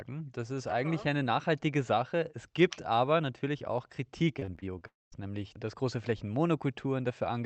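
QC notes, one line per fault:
4.39–4.83 s, repeated packet loss (robotic sound): Over this span, five short gaps opened in the incoming stream, the longest about 26 ms, and each was patched by extending the sound just before it. Roughly 100 ms of real audio is missing and about a quarter of the span is synthetic fill. The rapid alternation of real and stretched fragments gives the speech a choppy, robotic quality, with small pieces absent.
4.87–5.14 s, long network dropout: Real audio stops for about 260 ms, most likely because the network delivered nothing for that stretch. The receiver first carries the last sound forward as a fading buzz, then falls to near silence for about 210 ms. The speech resumes afterward with the lost portion gone rather than delayed. Through the Opus call path at 32 kbps, the audio is band-limited to about 8 kHz.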